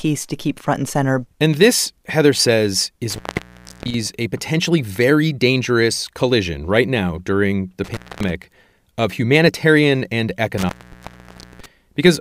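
At 3.10 to 3.94 s, before "a potentially very dangerous", at 7.84 to 8.31 s, after "right now during the", and at 10.58 to 11.66 s, after "of humanitarian and", intermittent contact opens the line for about 0.67, 0.24 and 0.91 s. Unlike a clean digital dropout, each gap is framed by crackle and leaves faint hiss rather than silence.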